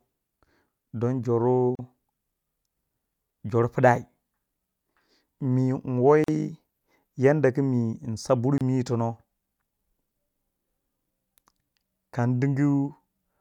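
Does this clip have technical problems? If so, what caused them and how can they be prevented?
Yes. The speech drops out briefly three times, at 1.75 to 1.79 s (about 37 ms), 6.24 to 6.28 s (about 42 ms) and 8.58 to 8.61 s (about 28 ms). Each is a hole with smeared edges, after which the sound resumes where it stopped. These are gaps at a join of encoded pieces: each segment was encoded separately, and the encoder's start-up delay and final-frame padding were left in when the pieces were spliced. Preventing this means encoding the audio as one continuous stream, or trimming each segment's encoder delay and padding before joining.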